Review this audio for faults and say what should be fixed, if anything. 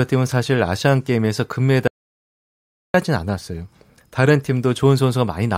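The input feed was likely lost for a moment, a dropped link, disconnected device or stray mute, while the recorder kept writing silence. The result is an audio dropout to silence from 1.88 to 2.94 s: the speech cuts off mid-flow into dead silence with no room tone, and about 1.07 s is simply missing. Secure connections and mute controls, and watch input meters while recording so any loss of signal is caught and retaken.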